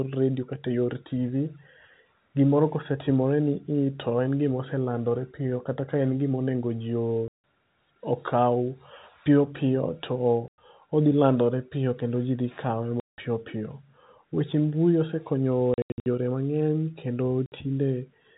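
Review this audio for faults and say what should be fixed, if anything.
Packets were dropped in transit and the receiver played silence in their place (packet loss filled with silence). This cuts hard-edged holes into the speech. Their lengths step in multiples that fit 20 ms packets:
7.28–7.41 s, after "gima onego ji"
10.48–10.58 s, before "odhi landore piyo kendo"
13.0–13.18 s
15.74–16.06 s, after "mbui osekonyo", as scattered gaps of up to 80 ms
17.46–17.52 s

Enabling packet loss concealment, backed by forward error correction on the G.711 stream, would fill these gaps with plausible audio instead of silence.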